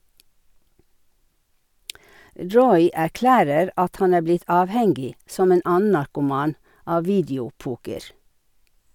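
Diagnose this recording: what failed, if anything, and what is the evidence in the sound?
Nothing failed; no fault is audible anywhere.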